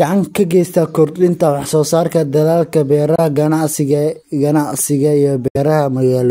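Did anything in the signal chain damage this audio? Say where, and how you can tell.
Yes. The speech drops to silence twice, from 3.16 to 3.19 s and from 5.48 to 5.57 s. The holes have abrupt or briefly faded edges and last 23 ms and 70 ms. Speech then resumes as if it had played on. This is likely a Bluetooth dropout in wireless playback, where late packets were discarded.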